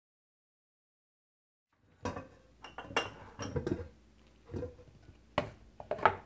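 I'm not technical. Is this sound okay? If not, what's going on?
Yes, nothing here is going wrong. The sound has come through a phone-call-style connection, so its highest sounds stop at around 8 kHz, and the smooth fade at the start rises gently from roughly 1.5 seconds to full level at 2.88 seconds.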